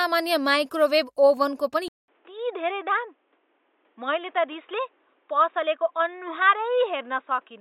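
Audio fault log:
1.88 to 7.61 s, input switched to a poorer device: right after "माइक्रोवेभ ओभेनको पनि" the audio cuts out for about 200 ms, then comes back noticeably duller and boxier, with nothing above 3.8 kHz, a level drop of roughly 5 dB, and a faint new noise floor sitting well under the speech. That mix of a short gap, a narrower band, a different tone and fresh background noise is what you'd hear when recording likely jumps to another mic or a headset's call mode.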